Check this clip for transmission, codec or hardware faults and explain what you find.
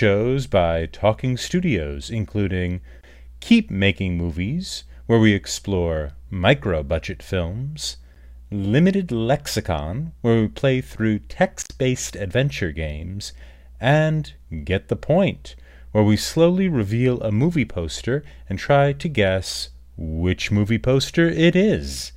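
One hardware fault shows up: around 11.6 to 11.72 s there's an intermittent contact, a loose connection opening for about 75 ms, so the speech drops out with crackle either side and faint hiss.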